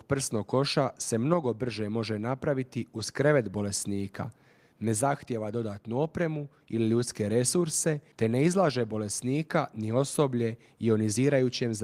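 No technical faults can be heard in this speech recording.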